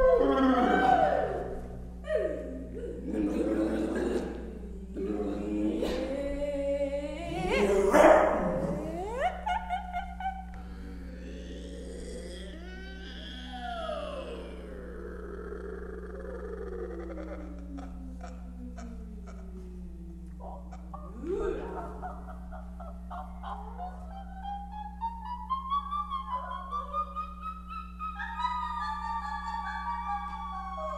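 Mains hum runs from start to finish: a ground loop or nearby transformer has leaked the 60 Hz power line into the signal, leaving a steady low drone only about 10 dB below the audio. On a spectrogram it appears as an unbroken horizontal line at 60 Hz.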